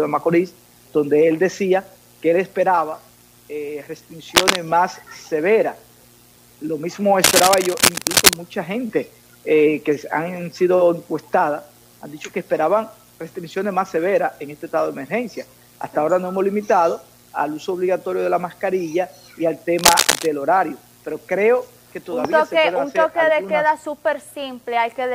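Bursts of harsh scratching and rustling cover the sound at 4.35–4.56 s, 7.22–8.36 s and 19.79–20.27 s, roughly as loud as the sound or a little louder. This is cable scratch noise, likely from a worn connector whose contact resistance fluctuates as it moves.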